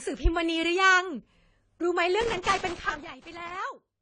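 Throughout the speech the top end stops at 10 kHz, and sibilants and sustained vowels sound dull, smeared and fizzy. This is plainly audible AAC compression, likely AAC-LC at a low bitrate around 24 kbps, discarding and coarsely quantising high-frequency content.

From 2.21 s to 3.57 s an irregular burst of crackle and scratching breaks through. This is loose connector crackle: a worn or dirty contact repeatedly making and breaking, chopping the signal and adding pops when any DC is present on the line.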